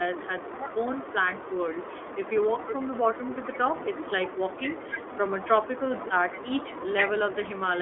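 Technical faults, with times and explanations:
Throughout, iLBC codec. The speech is squeezed into a telephone band of roughly 250 Hz to 3.5 kHz, so it sounds thin and boxy. Codec damage is plainly audible as a rough, slightly synthetic edge. Each 20 ms frame is coded on its own, without help from the frame before. That keeps frames robust but costs coding efficiency. The low bitrate fits the 15.2 kbps mode. The call's microphone high-pass is also present.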